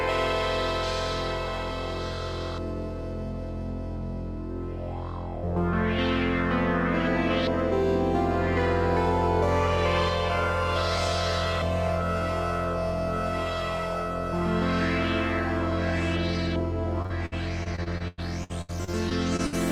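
Repeated packet loss (robotic sound) from 17.02 to 19.54 s: fourteen dropouts, the longest 99 ms, each patched by stretching the last sound, which gives a choppy stutter.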